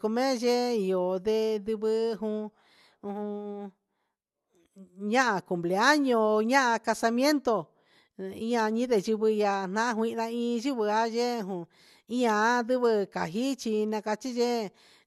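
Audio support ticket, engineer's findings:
Nothing stood out on listening to the speech; no symptoms to log against any component.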